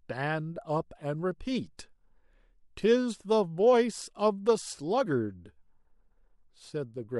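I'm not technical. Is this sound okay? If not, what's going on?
No. Pre-echo at about 1.77 s: just before a sharp sound in the speech, a hiss creeps in for a split second, and the attack itself sounds softened. The compression chops audio into short chunks and spreads its small errors evenly across each one. Here the sudden sound lands late in a chunk, so the noise meant to hide under it leaks into the quiet moment beforehand. This fits an encoder that never switched to shorter chunks for sudden sounds.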